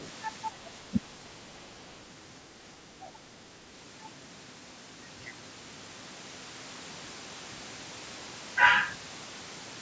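From 0.0 to 0.11 s, and again from 1.61 to 1.89 s, the other side's voice leaks through, likely because the echo canceller left some loudspeaker sound in the microphone. It sits about 20 dB, then about 30 dB, below the speech, as a second voice. On a spectrogram it shows as faint harmonic streaks separate from the main voice.

The speech is suppressed in double talk from 0.9 to 0.97 s and from 2.87 to 3.31 s: with both sides talking, the canceller likely turned everything down. The first drop, roughly 15 dB, is brief, and the second, roughly 10 dB, is longer. The waveform envelope sags there, and the spectrogram in this clip never reaches past 8 kHz.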